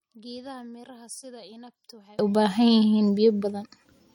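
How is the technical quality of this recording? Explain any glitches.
The recording has two technical faults: a coding problem that runs through the whole clip, and a polarity fault in the first half.

From the start to the end, the speech has the smeared, slightly watery texture of heavy perceptual coding, and nothing is present above 18 kHz. The likely cause is low-bitrate audio saved at a high bitrate, which fits a 48 kbit/s MP3 later re-encoded at a much higher rate. The second encoding only preserves the damage. A spectrogram shows a hard ceiling at 18 kHz, with patchy, blocky holes in the upper bands that come and go between frames.

From 0.0 to 2.19 s, one channel inverted is the likely cause of a collapse when the two channels are summed to mono. The centred speech drops by about 26 dB, leaving a faint trace made mostly of whatever differs between the sides. On a waveform the signal is nearly flat until 2.19 s, where full level abruptly returns.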